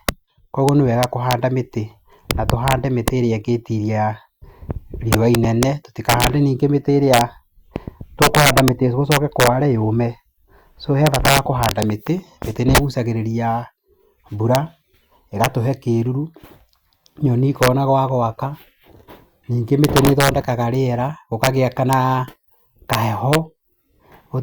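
Violent, sharp cracks burst out on the loudest syllables across the whole speech clip, harsher than ordinary clipping. This is integer overflow: with gain about 12 dB too hot, the few peaks that exceed the limit wrap around to the opposite extreme instead of being held.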